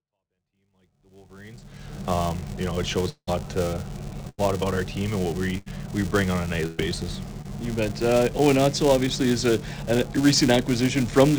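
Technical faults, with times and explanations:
Throughout, filter restarted on every block: a steady buzz at 345 Hz rides under the audio, rising and falling with its level. Each block starts from silence and begins with a tiny transient, and the repetition rate fits a 128-sample block.
3.09 to 3.29 s, long network dropout: the last sound is carried on as a fading buzz or hiss, then about 60 ms of silence, before the audio returns with roughly 180 ms gone. Most likely no data arrived for that stretch, and the receiver filled what it could.
4.29 to 4.40 s, 5.58 to 5.68 s and 6.66 to 6.80 s, burst of packet loss: each gap holds the preceding sound as a dimming buzz or hiss, and then the audio jumps ahead. About 80, 80 and 120 ms of material were lost in turn, with concealment covering each hole.
7.42 to 7.46 s, short concealed packet loss: a brief smear or wobble where about 20 ms never reached the decoder. 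The receiver extended the previous sound for roughly 24 ms and blended it back into the real audio.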